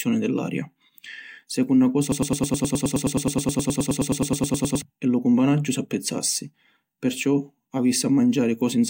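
From 2.12 s to 4.82 s the speech locks into a stutter: a fragment of about 105 ms repeats back to back, 26 times in all, giving a rapid repeating pulse for nearly three seconds before normal speech resumes at "e lu cumpanaggiu s’appizzassi". This is a broken-record loop. The likely cause is a stall in the player, encoder or stream, which kept resending the last fragment it held, so the speech that belonged in that stretch is lost.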